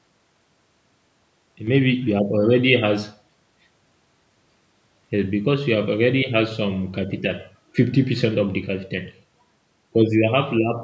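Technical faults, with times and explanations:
1.67 to 10.83 s, sudden gain jump: speech and background noise leap up together by about 6 dB and stay there, likely a gain change applied without a ramp.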